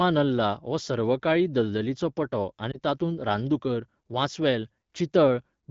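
At 2.72 to 2.80 s there is a lost AMR speech frame: a single 20 ms frame failed its checksum, and the AMR-WB decoder filled the gap by repeating the previous pitch and vocal tract parameters at reduced gain, heard as a brief dip or warble; the voice comes back weak or rough for a moment before the clear wideband speech resumes.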